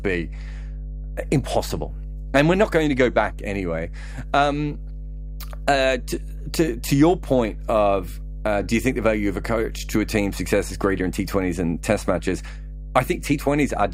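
Mains hum runs under the speech from start to finish: a steady 50 Hz tone with some low harmonics, loud at only around ten decibels below the voice. The power line has coupled into the signal path. Unlike irregular, broadband rumble, it holds one fixed pitch.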